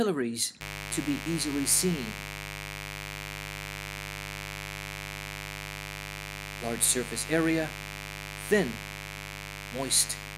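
From 0.61 s right through to the end there's a mains buzz, sitting roughly 10 dB under the sound. Something like a dimmer, rectifier or unshielded run is letting sharp switching spikes in twice per 50 Hz cycle, so harmonics stack up into a steady, raspy buzz.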